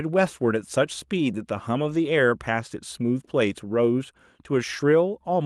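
Speech over an Opus call path with a 12 kHz audio band. From 1.85 to 1.95 s, lost packets were rebuilt from error correction. About 60 ms sounds rougher and noisier, which fits roughly three lost packets replaced by low-bitrate backup copies.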